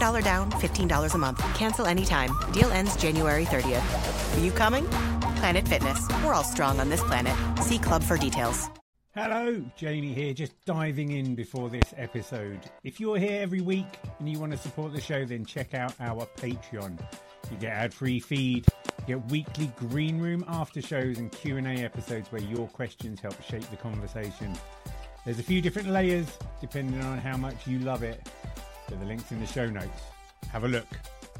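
At 2.62 to 2.64 s and again at 11.82 to 11.84 s, a single loud pop cuts through, peaking about 25 dB above the surrounding audio. At 18.68 to 18.92 s, two pops arrive in quick succession at a similar level. Each is likely a sudden voltage pulse, such as from a switch, static discharge or a driver glitch, added to the signal and shaped by the following circuitry into a sharp thump while the sound continues underneath.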